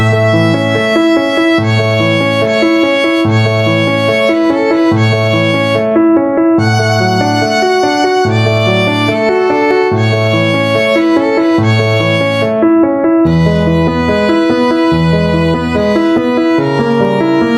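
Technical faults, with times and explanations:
Throughout, gain pumping: the level breathes audibly, with a gain swing of around 5 dB. The likely cause is input gain set far too high for the microphone, so a fast limiter or compressor keeps clamping down on every peak and releasing afterwards. That constant pull-down narrows the difference between loud and soft moments, leaving the sound squashed and unsteady.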